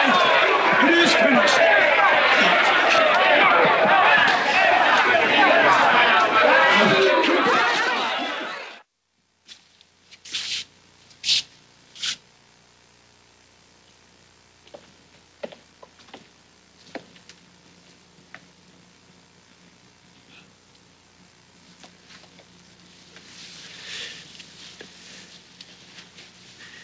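No technical faults can be heard anywhere in this audio. It carries the sound of a working call path, with nothing above 8 kHz, which fits a wideband call codec and the call's microphone processing.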